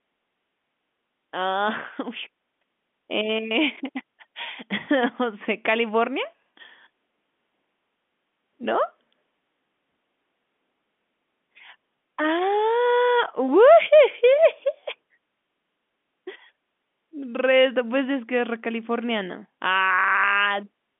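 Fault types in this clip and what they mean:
Nothing stood out on listening to this speech that would count as a fault.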